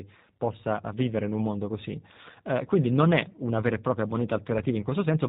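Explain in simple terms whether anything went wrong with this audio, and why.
The speech has been squeezed through the G.729 codec for its whole length. It sounds rough, slightly robotic and muffled, with nothing bright above 4 kHz. Unlike a simple muffling filter, the voice itself is rebuilt from a model, which brings that synthetic buzz.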